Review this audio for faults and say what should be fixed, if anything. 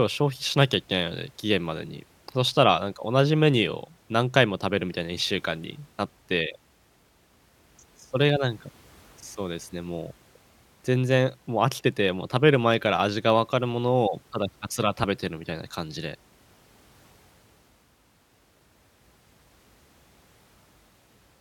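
Damaged data in a compressed stream causes two brief faults in this speech, at 15.03 to 15.05 s and at 18.39 s. Corrupted bytes made the decoder misread frames and resynchronise. Verify file integrity with checksums and use error-protected transport when storing or streaming the audio.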